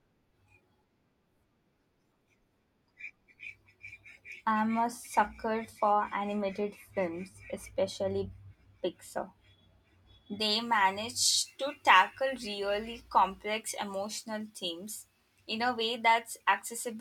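From 10.40 s to the end of the speech, the sound turns thin, bright and sibilant. This is pre-emphasis left on: the treble boost applied for transmission, here a J.17 curve, was never undone by the matching de-emphasis, leaving 10 kHz about 11 dB above 1 kHz.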